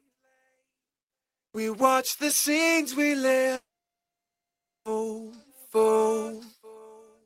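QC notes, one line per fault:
3.55–4.87 s, long network dropout: the sound smears into a short fading buzz, then 1.23 s of silence, and resumes at 4.87 s with 1.3 s simply missing. The likely cause is a stall in arriving packets, with the receiver briefly concealing before going quiet.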